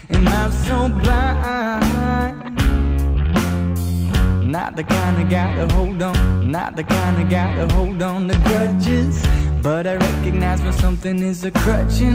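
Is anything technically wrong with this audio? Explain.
Yes. From 6.13 to 8.13 s, two seconds of the audio play a second time, with a small blip where it jumps back. This is a stream segment repeated: the player fetched or queued the same chunk twice, so that section is heard again before playback continues.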